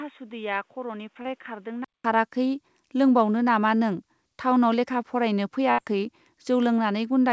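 From 0 to 2.04 s the sound is dull and boxy, with a narrower band. It sits roughly 10 dB lower than what follows, over a faint background noise about 40 dB down. At 2.04 s a gap of about 200 ms of silence precedes a sudden return to a fuller band. This points to an input switched to a poorer device, likely a secondary microphone or a headset's call profile, whose narrower passband, lower gain and own noise floor shape that opening stretch.

Inside that stretch, from 1.22 to 1.28 s, there is a short concealed packet loss. About 30 ms of audio failed to reach the decoder in time. The receiver papered over it with roughly 27 ms of synthesized continuation, extending the preceding sound before crossfading back into real audio. The result is a brief smear or wobble rather than a clean dropout.

A burst of packet loss follows from 5.72 to 5.81 s. Here about 60 ms went missing in a run, and around 63 ms of concealment was generated to cover it. 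The decoder held and extended the last sound while fading it down, giving a held buzz or fading hiss. Audio then resumes further along, with the intervening material gone. The call codec path itself carries content up to 8 kHz, consistent with G.722 wideband coding.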